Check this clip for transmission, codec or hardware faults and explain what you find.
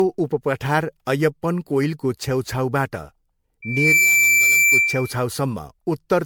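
Two faults are present: codec damage across the whole speech clip, and a feedback squeal in the middle.

Generation loss runs throughout. The speech sounds swirly, hollow and smeared, with blurred consonant attacks, worse than one pass at a bitrate fitting 96 kbit/s MP3 would give. The likely cause is repeated re-encoding, perhaps around seven passes, each requantising on a shifted frame grid so artefacts compound rather than staying fixed.

A loudspeaker feedback squeal runs from 3.62 to 5.17 s. A single 2.3 kHz tone swells over less than half a second to about 5 dB above the speech, because the mic-to-speaker loop's gain exceeded one at that frequency. Its self-building rise separates it from a steady interference whistle.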